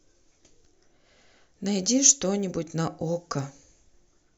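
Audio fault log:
throughout: resampler restarted on every block. Each 10 ms block was converted from 48 kHz to 44.1 kHz in isolation, leaving edge errors heard as a 100 Hz buzz under the speech.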